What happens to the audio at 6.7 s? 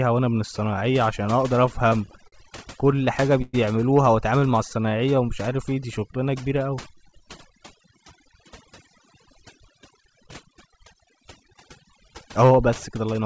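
At 6.7 s you're near the end of a jitter buffer slow-down that runs from 4.40 to 7.25 s. The buffer ran low or had just raised its target delay, so the receiver padded it by repeating single pitch periods and bits of pauses. Speech drags to about 91% speed at unchanged pitch, stretching things by about 0.25 s.

On top of that, overdone noise removal runs through the whole clip. The suppressor drops any frequency band close to its noise estimate, taking quiet parts of the voice with it. The background drops and breaks up into twinkling specks.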